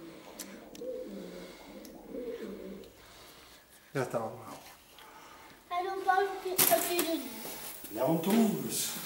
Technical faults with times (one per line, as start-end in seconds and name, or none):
6.56-9.05 pre-emphasis left on